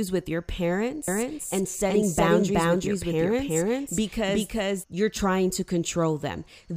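A slower capture path likely creates a doubled audio track from 1.08 to 4.84 s: an equally loud copy trails about 400 ms, starting and stopping abruptly.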